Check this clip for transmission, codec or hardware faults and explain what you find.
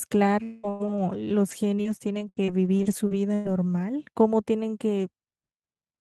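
The speech shows repeated packet loss (robotic sound) in two stretches. From 0.43 to 1.00 s, four gaps, the longest 198 ms, are bridged by extending the last received sound, giving a choppy sound with pieces missing. From 1.51 to 3.47 s, eight shorter gaps, up to 101 ms, produce lighter, intermittent choppy breakup.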